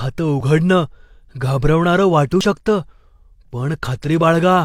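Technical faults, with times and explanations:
0.41–0.44 s and 2.41 s, overlap between stream segments: tiny skips, as overlapping timestamps at 2 s segment joins made the player discard real speech.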